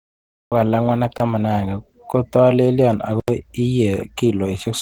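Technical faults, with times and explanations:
Throughout: Opus compression, likely at a low bitrate around 16 kbps in the codec's hybrid speech mode. The speech sounds hoarse, grainy and muffled. Band energies are kept, but the fine detail is rebuilt coarsely, so the harmonics blur into noise. A spectrogram shows smeared, noisy harmonic structure and texture-filled upper bands that extend to about 20.1 kHz, with little clean detail in them.
0 to 0.52 s: cut-off start. The file opens with digital silence, and the speech appears abruptly at 0.52 s, already partway through a sound. There is no natural attack or fade-in, only a hard step from nothing into the sound that can produce a click. The waveform shows a flat silent line that jumps straight into the signal. On the spectrogram this is a blank region ending in a vertical edge.
1.18 to 1.20 s, 2.13 s, and 3.20 to 3.28 s: blocks of digital silence. 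The signal drops abruptly to silence and then returns, with no fade at either edge. The gaps are 20 ms, about 12 ms and 80 ms long, which fits output buffers that weren't filled in time. The 12 ms gap sounds like a tick, and the 80 ms one sounds like a short hole in the speech. The waveform shows flat silent stretches, and the spectrogram shows blank vertical stripes.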